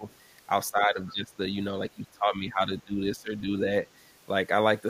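Speech with speech suppressed in double talk at 0.0 to 0.05 s, 0.71 to 1.38 s and 1.95 to 3.52 s. The talker dips by around 15 dB, likely because the echo canceller turned everything down while both sides spoke, seen as sunken waveform envelope. The other side's voice is leaking through at 0.11 to 0.15 s, very faintly, and at 1.06 to 1.12 s, more audibly, likely as leftover loudspeaker echo. On a spectrogram these look like brief, weak harmonic traces unrelated to the main talker.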